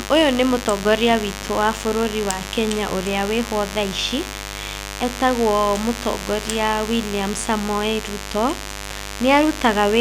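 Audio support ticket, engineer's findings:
Steady raspy mains buzz under the speech, start to finish, loud, roughly 10 dB below the speech. Sharp 100 Hz spikes from the 50 Hz supply, harmonics into the kilohertz range. Likely cause: dimmer, rectifier or missing shield.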